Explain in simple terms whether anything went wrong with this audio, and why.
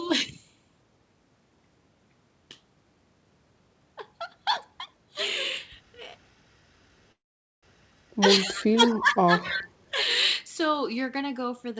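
A call audio freeze comes first, likely from packets arriving late so the receiver ran out of sound to play. From 7.12 to 7.65 s the sound stops and goes almost silent for about half a second, then carries on where it left off. Nothing is lost, but everything after it arrives later.

Echo leak follows: the far side's echo canceller likely let part of its loudspeaker sound back into its microphone. Short, faint copies of the speech, delayed by about a quarter of a second, slip in around 8.46, 8.89 and 9.42 s, each lasting only about a tenth to a sixth of a second.

Speech suppressed in double talk overlaps those moments. With both sides sounding at once, the echo canceller likely turned everything down. The speech dips sharply, becoming noticeably quieter, from 8.55 to 8.82 s, 9.00 to 9.33 s and 9.50 to 9.67 s.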